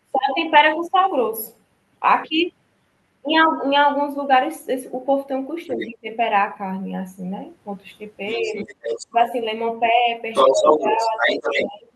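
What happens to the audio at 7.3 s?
Nothing goes wrong at 7.3 s; the speech carries on intact through that moment, with no dropout, click or distortion.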